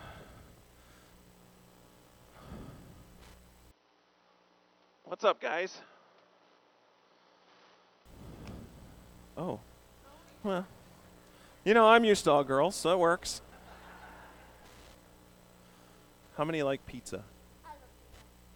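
At 3.71 s the sound suddenly goes dull and boxy, with nothing above 6 kHz, and it drops around 5 dB in level with no gap at the changeover. A faint new noise floor also creeps in underneath, well below the sound. Then at 8.06 s the full brightness and level snap back. That pattern most likely means an input switched to a poorer device mid-recording, a narrower-band mic with its own tone and hiss, before returning to the original.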